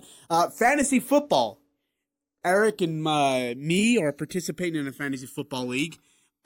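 Throughout the speech, the channels drift apart: separate clocks, a couple of hundred ppm off, slide the delay to about a millisecond, sweeping comb notches into slow flanging.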